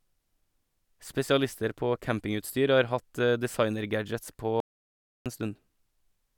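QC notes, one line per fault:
4.60–5.26 s, audio dropout to silence: the speech cuts out into complete silence with no room tone for about 0.66 s. Likely a lost input while recording continued.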